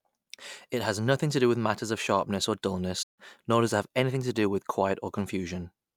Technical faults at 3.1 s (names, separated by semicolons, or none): playback stall